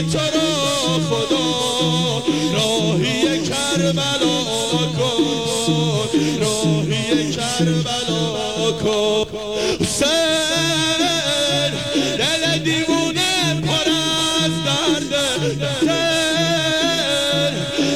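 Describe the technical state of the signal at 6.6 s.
At 6.6 s the signal is intact, with no audible technical fault at that moment.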